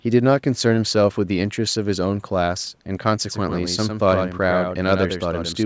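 From 3.27 s to the end of the clip, the speech suddenly gains a hard, slapback echo: a second full-band copy trails the first by about a tenth of a second, roughly 5 dB quieter, with no decay or room colour, and it switches on abruptly. This is a doubled audio track, likely from the same signal being captured again through a slower path and mixed back in, so two identical copies play out of step until the end.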